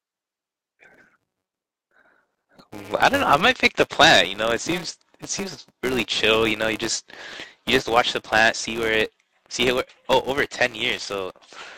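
Throughout the speech, a filter is restarted on every block: it discards its internal state at each block boundary and begins again from silence, so every block opens with a small transient. Those transients repeat at about 188 Hz, which fits a 256-sample block, and merge into a steady buzz laid under the speech. The buzz rises and falls with the level of the speech and is strongest on louder passages.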